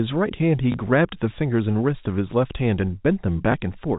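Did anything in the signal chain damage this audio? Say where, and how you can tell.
Yes, at the network stage: packet loss with last packet repeated, at 0.72–0.74 s and 3.52–3.54 s. Each 20 ms gap is filled by replaying the previous packet, so each sounds like a small blip rather than the silent hole of a plain dropout, beneath the 4 kHz-limited G.711 telephone band.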